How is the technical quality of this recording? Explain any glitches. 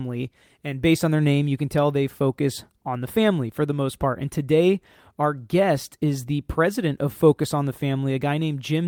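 The technical quality of this recording is sound, with no glitches to explain.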